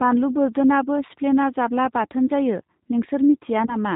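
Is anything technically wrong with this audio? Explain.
Yes. The whole clip carries G.729 codec damage: nothing above 4 kHz, with rough, synthetic speech rebuilt from pulses, a texture that points to roughly 8 kbit/s rather than plain band-limiting.

VoIP packet loss concealed by the speech codec occurs at 1.07–1.11 s and 3.66–3.76 s. Each gap is about 20 ms, which the decoder filled by extrapolating into a fading buzzy tone or coloured noise. Weak, distorted speech lingers afterward, unlike a clean silent dropout.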